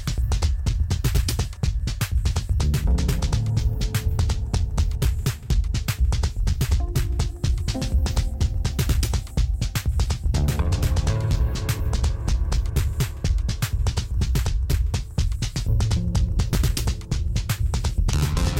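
There's a short case of chunks out of order at 16.53 to 16.55 s, right near the end of the audio. A roughly 10 ms slice seems to have been delivered or written one slot late, so it plays after the piece that should have followed it. Nothing drops out, but that tiny swap leaves three hard joins packed into about 20 ms. You hear it as a brief jumbled flick.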